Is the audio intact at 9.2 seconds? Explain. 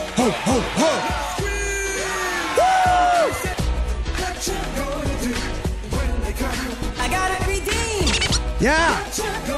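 Yes, the audio is intact at 9.2 seconds, with nothing at that point that interrupts or degrades the sound.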